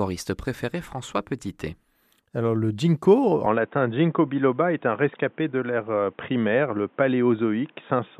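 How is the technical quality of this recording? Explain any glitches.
The recording has one clear fault: at 3.46 s, just after "le ginkgo", the input likely switched to a poorer device, such as a second microphone or a headset's call profile. The new path passes nothing above 3.8 kHz, so from there to the end the speech loses its upper band and turns dull and boxy. A faint new background noise, roughly 40 dB under the speech, comes in with it. Loudness holds steady, and there is no gap at the switch.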